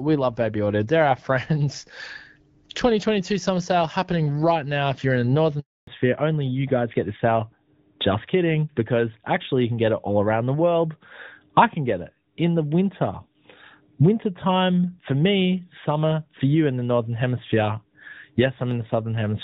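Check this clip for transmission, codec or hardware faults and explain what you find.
Two linked transmission faults occur at the same moment, both from the call changing networks.

Handover gap, 5.59 to 5.87 s, right after "you're in the": the audio fades within tens of milliseconds and stays silent for 280 ms while the link switches, so that stretch is lost. Packet-loss concealment would fill the hole with smeared or repeated sound. Here it is clean silence, and the sound changes afterwards.

Fallback to narrowband, from 5.87 s to the end: the call drops from HD Voice to an older narrowband codec, and nothing remains above 4 kHz. The speech turns duller and rougher. Before the gap, the wideband codec sounds clear, which fits a rate around 12.65 kbit/s. A low wideband bitrate would add rasp but keep the upper band. This fault instead shows a hard 4 kHz ceiling beginning exactly at the handover.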